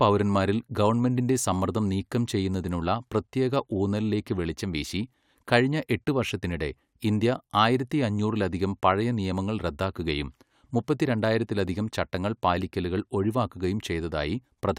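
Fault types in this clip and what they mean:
No technical faults can be heard in this speech recording.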